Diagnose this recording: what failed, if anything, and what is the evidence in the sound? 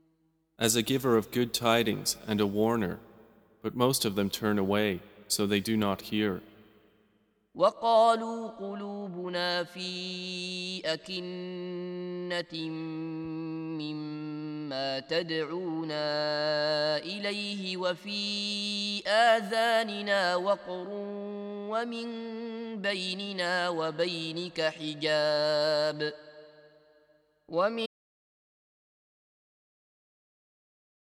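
Audio dropout to silence at 27.86 s, lasting to the end, about 3.2 s. The sound cuts off abruptly to silence with no room tone left. The input was likely lost at the device link or wiring, while the recorder kept writing silence.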